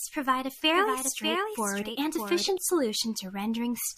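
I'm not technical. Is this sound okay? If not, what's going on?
No. Right after "provide a", at 0.74 seconds, a second copy of the same speech joins in. It runs until 2.58 seconds. This is a doubled audio track. The copy trails the original by about seven tenths of a second and is a little quieter. It sounds flat and dry, not like a room echo. It switches on and off suddenly. The likely cause is the sound being picked up twice, once through a slower route.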